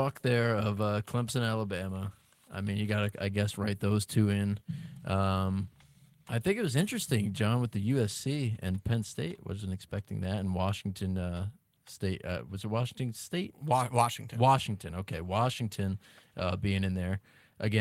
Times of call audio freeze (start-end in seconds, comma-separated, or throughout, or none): none